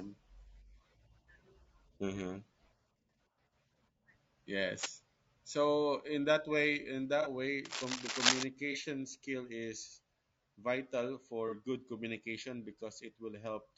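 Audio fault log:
Throughout: low-delay AAC compression, likely AAC-ELD at a rate that sounds like about 32 kbps. The speech is rough and grainy. Its short coding frames cannot separate the pitch harmonics cleanly, so noise fills the gaps between them and the top band sounds thin and synthetic. On a spectrogram the harmonic lines look smeared, with speckled energy between them and a patchy, blocky upper band instead of smooth detail.
4.73–4.89 s and 7.65–8.43 s: cable scratch noise, likely from a worn cable, connector or control being moved, which makes the contact resistance jump rapidly. The first burst is nearly as loud as the speech and the second, longer one matches it. Both are heard as a scratchy rustle over the sound. The waveform shows dense, jagged, irregular spikes, and the spectrogram shows broadband, uneven vertical striations across those spans.
7.22 s, 8.72 s and 11.48 s: AAC frame loss with concealment. 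Each gap lasts about 30 ms, which fits one lost frame. The decoder patched it from the previous spectrum, giving a brief smeared, phasey blip. The first comes right after "in that way in", the second just before "skill is vital", and the third between "skill is vital" and "good communication". A spectrogram shows a short, blurred vertical band where the harmonic structure breaks.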